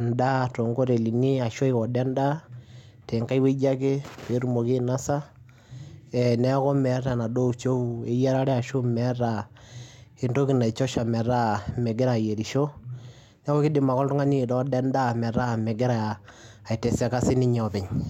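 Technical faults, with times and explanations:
1.02–18.09 s, sample clock jitter: from just after one second to the end, a faint hiss and graininess rides on the speech, roughly 45 dB below it. It is strongest on loud passages and sibilants and disappears in pauses. The converter's clock wanders by something on the order of a microsecond or two, so steep, fast-moving parts of the waveform are sampled at the wrong level. Unlike a steady noise floor, this error follows the signal's slope and falls silent whenever the speech stops.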